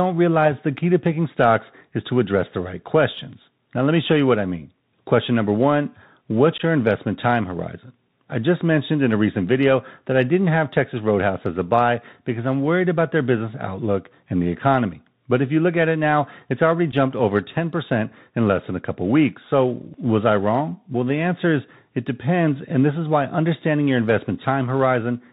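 Bluetooth CVSD headset codec, throughout the clip: the speech has plainly audible codec damage, and the band stops at 4 kHz, which fits a 64 kbps CVSD link. CVSD sends one bit per sample at 64 kHz, telling the decoder only to step up or down, with a step size that adapts. Loud high-frequency sounds outrun that step and distort, s sounds turn scratchy, and a granular hiss sits under the speech.

Unconcealed Bluetooth headset packet loss at 6.58 to 6.61 s, just before "your investment time horizon": about 15 ms of audio is missing, which fits roughly two lost packets. Nothing patched the gap, so silence or an idle pattern stands in for the audio and leaves a short hole with abrupt edges. A second loss of 7.5 ms at 16.92 s, right after "it now it's already", fits a single packet and leaves a shorter hole of the same kind.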